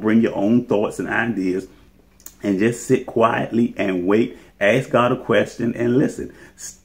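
Nothing in the audio stood out as a technical problem on listening.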